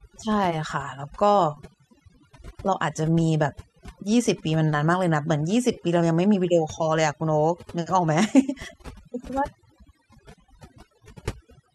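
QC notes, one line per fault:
Throughout: overdone noise removal. Noise reduction was applied far too strongly to a noisy speech recording. Individual frequency bands that sit close to the tool's noise estimate are pulled right down or switched off. The quieter parts of the voice fall into that range and vanish along with the noise. Between phrases the background drops to near silence, dotted with small twinkling specks.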